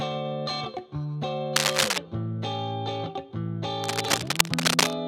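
From 1.56 to 1.98 s, and again from 3.82 to 4.98 s, dense, uneven scratching and rustling sits over the sound, a little louder than the sound itself. This is cable scratch noise, likely from a worn cable, connector or control being moved so its contact resistance fluctuates rapidly.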